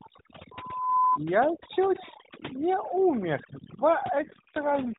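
Across the whole clip, overdone noise removal leaves the background near-silent apart from twinkling specks. The reduction was set so aggressively that quieter parts of the speech are suppressed along with the noise estimate.

From 0.51 s to 1.18 s a loudspeaker feedback squeal appears. A 1 kHz tone swells over about half a second and peaks at about 5 dB above the speech, the sign of a microphone-to-loudspeaker loop whose gain exceeded one at that frequency.

From 4.16 s to the end at 4.99 s there is an AMR rate drop. The narrowband mobile codec's band holds at 4 kHz and its light coding roughness becomes rougher and more synthetic, with no gap. This points to the link stepping down from 12.2 to 5.9 kbps.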